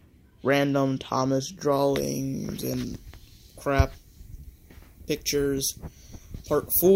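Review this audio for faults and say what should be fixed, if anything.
Pre-emphasis left on from 1.72 s to the end: the treble boost matching a 50 µs FM curve was never undone by its de-emphasis, so 10 kHz sits about 10 dB above 1 kHz and the sound turns thin, bright and sibilant. To prevent it, apply the matching 50 µs de-emphasis wherever the emphasised signal is decoded or captured.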